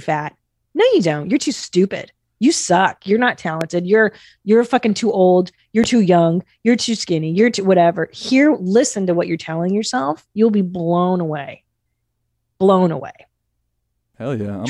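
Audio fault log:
3.61–3.63 s and 5.84–5.86 s, loud pop: two sharp single pops over the speech, the first jumping about 15 dB above the signal and the second about 10 dB. Each is a brief pulse riding on top while the speech carries on underneath, likely from a plug, switch or static discharge.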